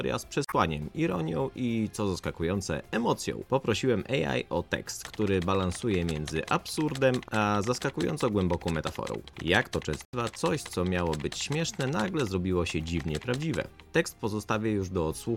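At 0.45 to 0.53 s and again at 10.05 to 10.14 s, damaged data in a compressed stream breaks the decoding: the corrupted frames are misread and the decoder loses sync until it finds the next valid frame header. Each event is heard as a brief chirp, squawk, click or short hole, and the first lengthens the audio by 4.2 ms. The waveform has an abrupt, jagged discontinuity.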